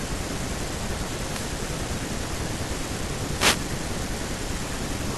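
At 1.30 to 1.47 s and again at 3.36 to 3.59 s, a wireless microphone noise hit cuts across the speech as a brief swish of static. The FM radio link faded, letting receiver hiss surge. Unlike a digital dropout, the sound isn't silenced but buried in noise.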